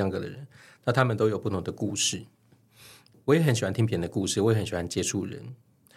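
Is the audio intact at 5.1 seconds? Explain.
Yes, at 5.1 seconds the speech plays through intact, with no dropout, glitch or other fault audible at that moment.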